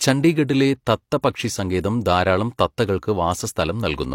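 At 1.22 s and again from 3.52 to 3.56 s, the speech shows pre-echo. The transform codec spread quantisation noise across each block, so hiss leaks about 18 ms and 37 ms ahead of sharp attacks, leaving those onsets soft and smeared.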